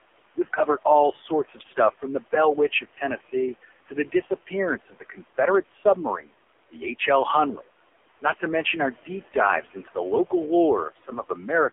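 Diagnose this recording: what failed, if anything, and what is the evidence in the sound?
Call processing: noise suppressor artifacts throughout. The room noise, about 19 dB below the speech, drops by about 17 dB between phrases and returns under speech.

Codec: AMR narrowband mobile codec throughout. Nothing passes above 3.5 kHz, and the speech sounds heavily buzzy and synthetic, which fits a low AMR-NB mode near 6 kbps.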